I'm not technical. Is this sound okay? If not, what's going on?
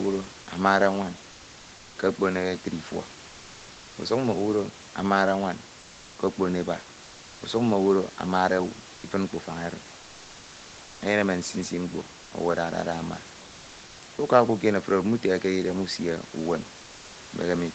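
No. At 8.95 to 9.03 s and 12.23 to 12.31 s, comfort noise in place of the background briefly replaces the real room sound. This is likely the call pausing transmission during silence.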